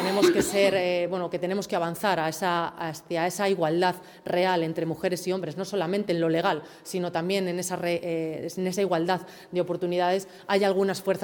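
No technical faults can be heard anywhere in the audio; the signal stays steady and intact throughout.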